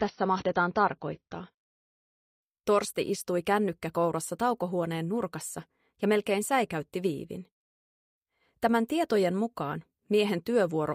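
For the first 2.0 s the sound is dull, with nothing above 6.6 kHz and stronger codec artefacts, then snaps cleaner without a gap. That's an adaptive stream starting at a low bitrate, consistent with roughly 24 kbit/s stepping up to 96 kbit/s.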